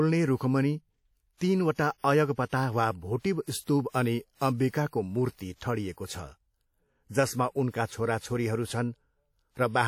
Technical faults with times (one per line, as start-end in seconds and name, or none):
0.00-9.88 WMA compression
1.74-1.78 pre-echo
3.19-3.24 pre-echo
3.61-3.94 pre-echo
5.92-5.97 pre-echo